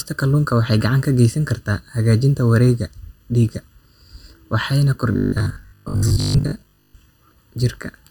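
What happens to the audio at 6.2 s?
At 6.2 s the voice is inside a stretch of robotic sound from repeated short buffers, running from 5.12 to 6.96 s. It becomes a rigid, metallic buzz fixed at 50 Hz that still loosely tracks the speech. The likely cause is audio arriving too seldom, so a 20 ms segment is looped in place of most of the real signal. Underneath this, channel delay (comb filtering) runs throughout. One channel lags by under a millisecond, and mixing to mono cuts evenly spaced notches starting around 700 Hz, which gives a hollow, phasey colour.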